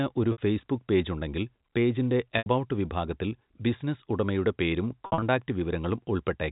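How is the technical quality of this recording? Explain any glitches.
The recording has three dropouts on narrowband telephone-band audio, where nothing above 4 kHz comes through. The dropouts show packet loss with pitch repetition at 0.32–0.38 s (60 ms), 2.38–2.46 s (80 ms), and 5.06–5.22 s (about 120 ms lost in bits over 160 ms). The receiver loops the last pitch cycle to cover each gap and fades it, so you hear a brief held, buzzy tone before the speech picks back up.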